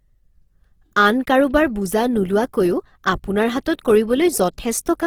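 Throughout the speech there is plainly audible damage from what is likely Opus compression in its music mode, which fits roughly 16 kbps. Sounds turn rough and grainy, not swirly. On a spectrogram, bands look noise-filled instead of holed, and the spectrum extends to about 20.2 kHz.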